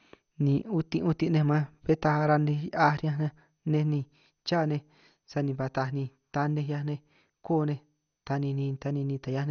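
Throughout the speech, the sound is dull and gurgling, with a granular roughness and nothing above 6.5 kHz. This is likely MP2 compression. Layer II coding starved of bits shuts off upper sub-bands and coarsely quantises the rest, which fits a rate near 48 kbps.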